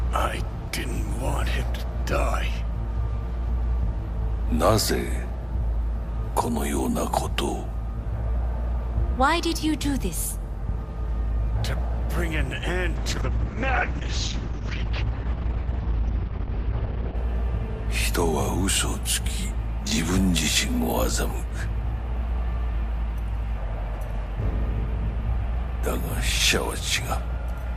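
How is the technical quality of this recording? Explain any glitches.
There's one glitch worth flagging. From 12.97 to 17.21 s there's a call bitrate drop. The encoder starved for bits, so the top end cuts off around 6 kHz. That points to roughly 64 dropping to 8 kbps, and the sound goes muffled and watery until it recovers.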